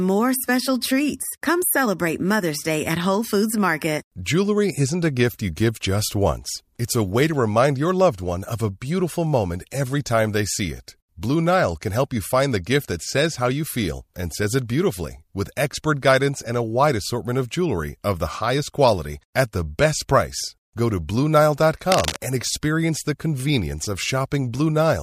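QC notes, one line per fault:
21.92–22.17 s, cable scratch noise: a quarter-second burst of uneven scratching close to speech level, likely a moved worn connector with rapidly changing contact resistance.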